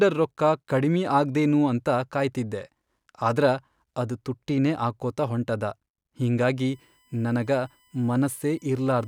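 USB whine enters at 6.66 s and runs to the end: a fixed 1 kHz tone, strongest at its 3 kHz harmonic, roughly 40 dB below the speech, leaking in through power or ground as the bus draws current in 1 ms frames.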